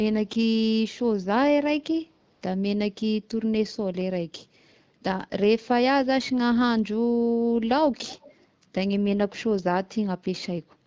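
A speech recording with two brief faults. From 2.33 to 2.41 s, AMR comfort noise fills an 80 ms gap: the phone judged the talker silent and stopped sending speech frames, so the receiver substituted synthetic noise built from a rough level and spectral description. On a spectrogram this shows as a short, smooth, evenly textured patch with none of the fine background detail on either side, and the waveform steps to a flat, steady noise floor that starts and stops abruptly. From 8.03 to 8.45 s there is a faint, delayed copy of the voice trailing the original by 336 ms, at roughly 25 dB below the speech. This is likely an echo leak, where a loudspeaker on one side was picked up by its microphone and not fully cancelled. On a spectrogram it appears as a weak duplicate of the speech harmonics offset about a third of a second later, with a low-level ripple in the waveform beneath the main signal.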